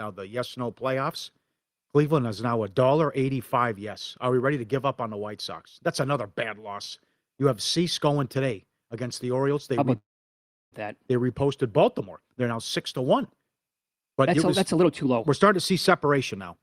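Speech clip with two timing faults. From 9.97 to 10.74 s the sound stalls in a call audio freeze: a brief fading tail, then roughly 0.69 s of silence, after which the speech resumes where it stopped with nothing lost. The likely cause is delayed packets draining the jitter buffer. From 13.82 to 16.57 s a jitter buffer speed-up plays the speech at about 120% speed with unchanged pitch, sounding hurried, as repeated pitch-period cuts remove about half a second of backlog.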